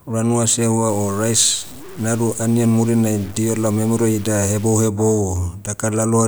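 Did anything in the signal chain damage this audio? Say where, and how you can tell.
Yes. A sample-format conversion stage likely truncated the speech to low bit depth without dither, about 6 bits, from 0.89 to 4.88 s. The error tracks the signal, sitting only about 25 dB below it, so quiet stretches turn gritty and the softest parts sputter or drop out.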